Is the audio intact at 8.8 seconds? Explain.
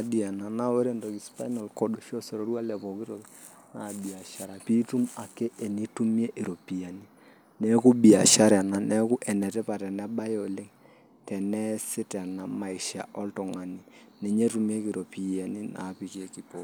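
Yes, at 8.8 seconds the speech plays through intact, with no dropout, click, distortion or other break in the sound at that moment.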